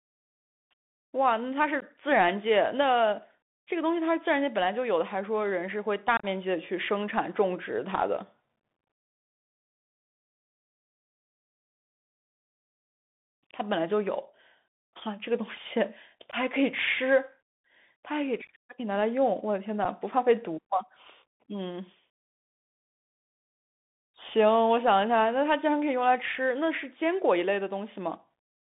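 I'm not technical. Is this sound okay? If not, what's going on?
No, it's not quite okay. The whole recording has gone through a Bluetooth headset's CVSD codec, the old narrowband phone-call mode. It keeps only a thin slice of the sound, roughly 150 Hz to 3.6 kHz, so the speech sounds boxy, s sounds come out scratchy, and a grainy hiss sits underneath.

On top of that there's unconcealed Bluetooth headset packet loss. Tiny chunks of audio between headset and phone went missing and were left as abrupt gaps, at 1.80 to 1.83 s, 6.17 to 6.26 s (a rougher, chopped-up patch), 16.31 to 16.35 s, 18.47 to 18.50 s, and 19.85 s.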